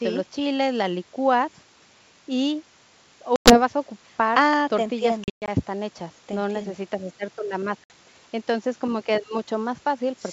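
Speech on a wideband G.722 call, with packet loss on an ADPCM call at three points. Missing packets are filled with silence, and the receiver's adaptive predictor and step size lose track of the sender's. The result is abrupt holes: 100 ms at 3.36 to 3.61 s, about five packets' worth; 180 ms scattered across 240 ms at 5.24 to 5.51 s, longest gap 120 ms; and 60 ms at 7.84 to 7.91 s. After each hole, sound resumes slightly distorted before settling.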